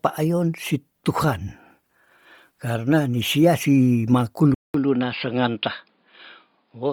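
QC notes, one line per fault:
throughout: Bluetooth LC3 compression. The speech has a breathy, grainy edge, and the upper band sounds smeared and hissy rather than detailed, although content still reaches about 20.2 kHz. This is likely LC3 coding at around 32 kbps in 10 ms frames. At that rate the codec discards much of the high spectrum in each frame and fills the gaps with synthetic noise, so the treble turns to grain. The damage is heavy.
4.54 s to the end: input switched to a poorer device. Just after "karna ni sia si" the sound drops out for about 200 ms and then returns duller and boxier. Nothing is left above 5 kHz, the level is about 5 dB lower, and a new noise floor sits roughly 40 dB under the speech. The likely cause is the system switching mid-recording to a narrower-band microphone or headset call profile with its own tone and noise.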